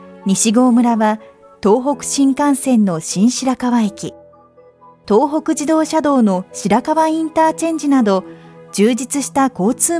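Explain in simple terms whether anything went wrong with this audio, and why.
Nothing went wrong here.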